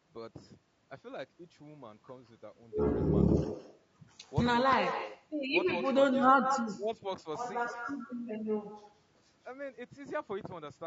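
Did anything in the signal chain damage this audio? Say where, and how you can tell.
Yes. Call processing: echo with no canceller runs throughout. A copy about 9 dB quieter trails the speech by roughly 150 ms, loudspeaker pickup returned unremoved.

Codec: throughout, the voice sounds rough and grainy, with noise between harmonics and a lowered or synthetic top, likely low-delay AAC compression (AAC-ELD) at a low bitrate, consistent with 32 kbps.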